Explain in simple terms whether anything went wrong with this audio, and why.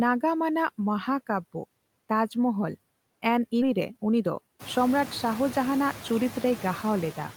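Three things went wrong in this speech recording.

The first is noise suppressor artifacts, which run through the whole clip. A noise-reduction stage keeps guessing which parts of the sound are steady background hiss and turns those down, moment by moment. The background therefore dips in the pauses and comes back under the voice. A real quiet room would stay evenly quiet. Here the background pumps in step with the talking, especially after the room noise gets louder around 4.5 s.

The second is a skip ahead at about 3.61 s. Roughly a second of speech simply vanishes, and the audio on either side is stitched together with no gap and no filler sound. That is what sets it apart from a dropout or a glitch that gets patched over: you hear no silence and no smeared sound, just an abrupt jump, as if someone nudged a tape forward.

The third follows straight after. A jitter buffer speed-up runs from 3.71 s to 6.52 s. 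The receiver had built up too much waiting audio, so it snipped out many tiny slivers to catch up, about 150 ms in total. The speech plays about 6% faster and sounds slightly rushed, but the pitch stays the same. That unchanged pitch is what tells it apart from a recording simply played too fast, which would also sound higher.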